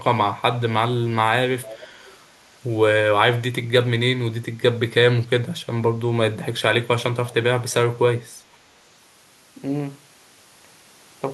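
Speech with two short bursts of echo leak: a faint delayed copy of the talker returns from 1.62 to 2.14 s, trailing by 444 ms at about 20 dB below the direct speech, and again from 7.29 to 7.34 s, lagging 509 ms at roughly 25 dB down. The likely cause is a far end on loudspeaker whose echo canceller let part of its microphone pickup through and sent it back.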